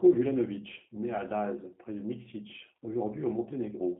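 G.729 codec coding runs through the whole speech clip. The low-rate coder rebuilds each 10 ms frame from a vocal-tract filter, a pitch predictor and a few fixed pulses, instead of carrying the waveform itself. The result has a plainly audible roughness and a slightly synthetic buzz on voiced sounds, typical of an 8 kbit/s G.729A link. The band is held between about 150 Hz and 3.5 kHz, so the sound is thin and telephone-like, with no low body or upper brightness.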